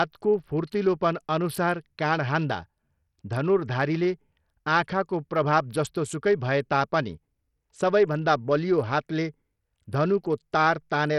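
A speech recording with gritty, coarse treble throughout, flickering in the upper range and stopping completely above 14.7 kHz. That heavy roughness points to likely Bluetooth SBC compression at a starved bit pool, which fits roughly 64 kbps, leaving the top sub-bands without bits and the rest crudely quantised.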